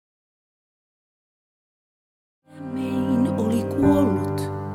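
No technical faults are audible.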